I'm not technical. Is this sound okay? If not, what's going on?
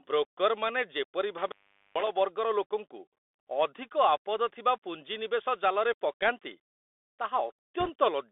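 No, there are a few problems. The whole clip went through a Bluetooth CVSD headset codec, the old phone-quality headset link. It keeps only about 300 Hz to 3.6 kHz, so the speech sounds thin and boxy, with scratchy s sounds and a grainy hiss underneath.

From 1.37 to 2.1 s there's an intermittent contact, like a loose plug or cable briefly losing connection. The sound drops out for a bit under half a second, with crackle where it cuts and comes back, and just faint hiss in the gap.

Near the end, from 7.8 to 7.91 s, there are bit errors on the Bluetooth voice link. A small fraction of the data got scrambled in the wireless hop, which adds a quick rushing, crackly noise over the speech rather than sharp clicks.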